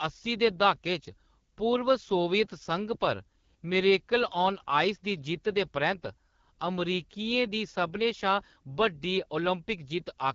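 AMR wideband (HD Voice) codec damage runs throughout: rough, raspy speech at a low rate, likely near 8.85 kbit/s, with nothing above 7 kHz.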